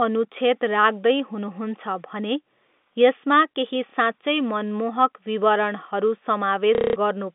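Speech comes through a G.711 telephone line, limited to about 200 Hz to 3.6 kHz. Packet loss with the last packet repeated occurs twice. Just after "यसमा केही", at 3.9 s, a 30 ms repeat leaves a small blip. From 6.75 to 6.96 s, a 210 ms repeat stutters robotically. It buzzes at about 33 Hz, which fits 30 ms packets.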